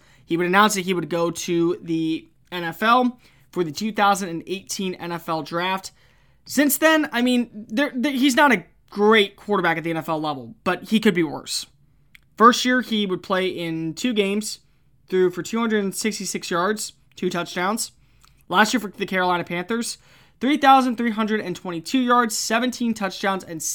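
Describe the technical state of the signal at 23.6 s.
At 23.6 s the signal is intact, with no audible technical fault.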